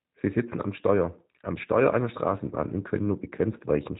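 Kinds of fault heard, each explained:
G.729 codec: speech was coded by a vocal-tract and pulse model consistent with 8 kbit/s G.729, sounding plainly rough and synthetic, with nothing above 3.8 kHz.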